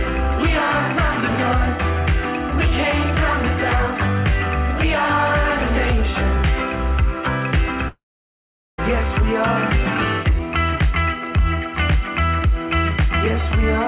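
At 7.88 s the sound breaks off. The last moment is held as a short buzz that fades. About 0.79 s of silence follows. Audio returns at 8.80 s, with a piece gone. This is likely a long network dropout, masked by the receiver.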